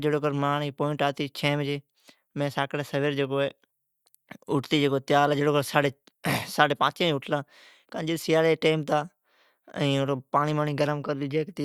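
Nothing in this recording of speech points to a technical fault: the signal stays steady, continuous and intact throughout.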